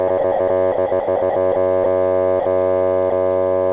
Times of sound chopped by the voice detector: 0.08-1.56

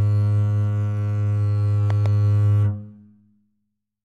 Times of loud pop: 1.90-2.08

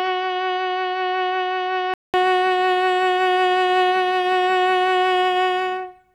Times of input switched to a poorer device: 0.00-2.14

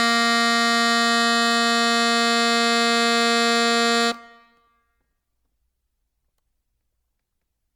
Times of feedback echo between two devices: none

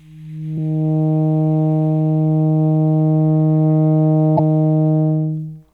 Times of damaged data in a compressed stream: 0.54-0.57, 4.35-4.39

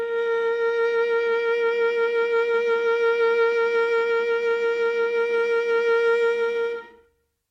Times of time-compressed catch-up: none

